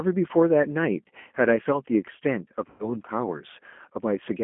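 G.729 codec, throughout: the speech is rebuilt from a vocal tract filter, a pitch predictor and a few pulses per frame, and the band stops near 3.4 kHz. The result is plainly rough and synthetic, which fits 8 kbit/s G.729A coding.

VoIP packet loss concealed by the speech codec, from 2.70 to 2.97 s: about 90 ms of audio is missing, which fits three lost packets. The decoder extends its last pitch and filter into a fading smear, and the speech stays weak and distorted until about 2.97 s.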